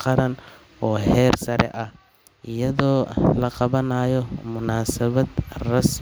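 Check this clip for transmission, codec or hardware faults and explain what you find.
Nothing in the speech signal points to a technical fault, with its level, continuity and timing holding steady throughout.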